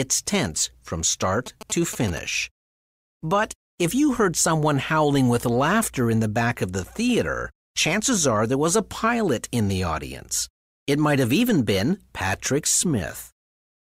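From 1.46 to 2.19 s, GSM signalling bursts from a nearby phone break in as a galloping dit-dit-dit of short 217 Hz buzzes, about 15 dB below the speech. The grouped rhythm separates this from a steady hum.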